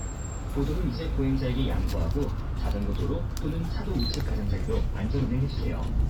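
No technical faults can be heard in this audio.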